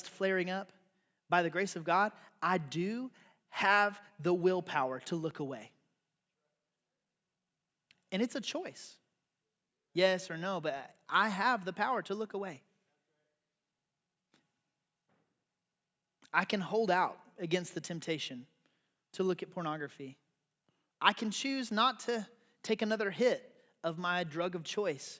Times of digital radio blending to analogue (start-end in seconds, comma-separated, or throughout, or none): none